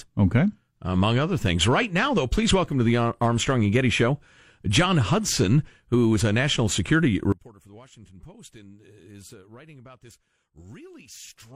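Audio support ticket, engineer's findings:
Speech drops to faint residue, about 25 dB down, 7.32 s to end. Likely one channel inverted, cancelling in mono sum. Waveform abruptly shrinks.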